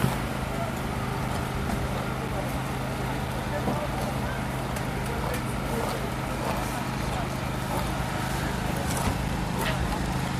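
Regular ticks cut through the audio once a second, from 0.28 s to 10.28 s, each a gap of a few milliseconds dropped to silence. These are periodic USB or driver dropouts: something repeatedly stalls the audio driver or USB transfer at a fixed one-second interval, losing a brief slice each time.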